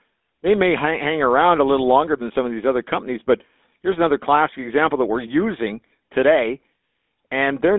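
Speech running through the GSM full-rate codec for the whole clip, with the line narrowed to roughly 200 Hz to 3.6 kHz and a plainly audible buzzy, gravelly roughness. That rasp comes from pulse-driven excitation at a rate that fits 13 kbps, which sets it apart from clean band-limiting. The call microphone's bass roll-off is normal.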